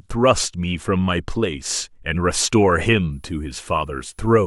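At 3.12 s a switching supply whistle appears under the speech and runs to the end of the clip at 4.46 s. It is a thin, high tone near 10 kHz, sitting roughly 40 dB below the speech. Its pitch wanders slightly, between about 10.25 and 10.34 kHz. A switching power supply has fallen into an audible burst mode, or is beating against another supply. Its switching energy leaks into the audio path as this faint whine.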